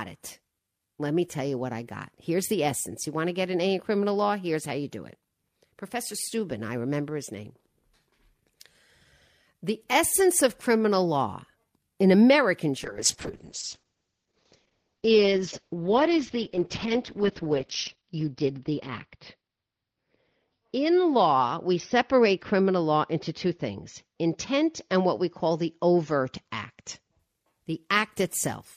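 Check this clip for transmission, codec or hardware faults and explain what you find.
One transmission fault is present: a call bitrate drop from 12.85 s to 27.25 s. The encoder's bit budget collapsed, consistent with roughly 64 down to 8 kbps, holding its lowest for 5.3 s. The bandwidth narrows from 20 kHz to 6 kHz, making the speech muffled and rough until recovery.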